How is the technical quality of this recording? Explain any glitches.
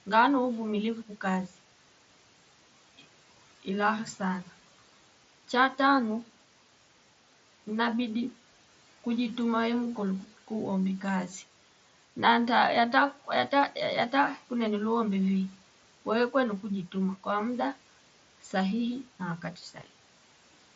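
There is one glitch near the end. Room noise sits about 23 dB below the speech. The sound stops at 7.7 kHz, with light grain on loud sounds, which fits the mSBC Bluetooth headset codec.

From 19.42 to 19.87 s, just after "kwa mdaa sahihi na", the noise suppressor cut part of the speech. It misjudged quiet speech energy as background noise and turned it down with the noise. The gain fell by up to about 10 dB. Roughly a tenth of a second of sound is affected in total. Those moments sound swallowed and faint.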